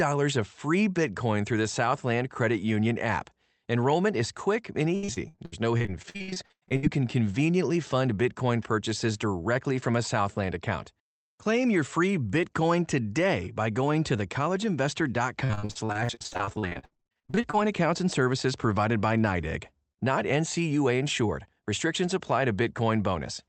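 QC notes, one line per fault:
4.95–6.85 s and 15.45–17.55 s, repeated packet loss (robotic sound): dense runs of short dropouts, up to 99 ms and 55 ms, with over 40% of each stretch patched by stretched-out prior sound. This gives a choppy effect with pieces missing. The spectrogram shows smeared, repeated frames under the Opus call path's 8 kHz ceiling, and the waveform shows stuttering, copied-looking segments.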